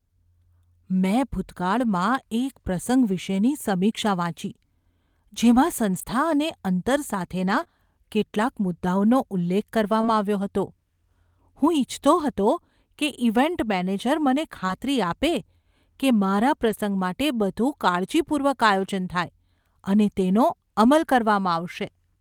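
Brief rough, noisier patches appear at 1.81–1.91 s, 5.93–6.03 s and 7.47–7.61 s. This is a lost packet rebuilt from error correction: the decoder played low-bitrate copies carried in the following packets, about 60 to 80 ms of audio, so nothing drops out but the detail thins. Right after, at 7.63–7.67 s, there is a short smear where about 20 ms of speech was lost and filled by extending the preceding sound, a short concealed packet loss. Another rebuilt patch follows at 8.37–8.43 s (about 40 ms). At 10.01–10.05 s and 14.67–14.70 s, a short concealed packet loss gives a brief wobble, with about 18 ms and 11 ms of extrapolated sound blending back, and its tail overlaps 20 ms rebuilt from error correction. A final rougher 40 ms rebuild comes at 16.64–16.70 s.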